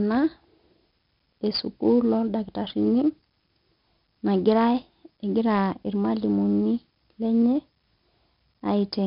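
Throughout, the speech has heavy 4-bit ADPCM compression: coarse predicted steps leave gritty hiss on loud syllables, and nothing above 5.3 kHz survives.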